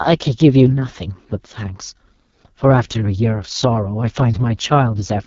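AMR wideband (HD Voice) codec damage runs through the whole speech clip: the voice is rough and raspy, with nothing above about 7.1 kHz. That heavy coarseness points to the codec's lowest mode, which fits 6.6 kbit/s, where the pulse-driven vocal tract model gets too few bits per frame.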